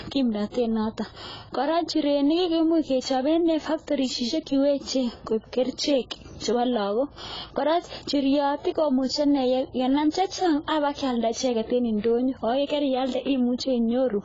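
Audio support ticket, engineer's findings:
Whole clip, speech band-limited, nothing above 7.6 kHz. Dull, smeared tone, heavy warbling and fizz on sibilants. Likely AAC compression, AAC-LC at a very low bitrate, around 16 kbps. Encoder lowered cut-off, starved spectral lines of bits, leaving holes.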